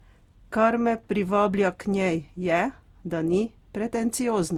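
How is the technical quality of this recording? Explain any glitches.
The recording is degraded throughout by generation loss. The speech was likely decoded and re-encoded about five times through a lossy codec, consistent with Opus at around 64 kbit/s. Each pass quantised afresh on a shifted frame grid, so the errors piled up. The result sounds swirly, smeared and hollow, with blurred consonant attacks. Content still reaches about 20 kHz, so the damage is in texture, not bandwidth.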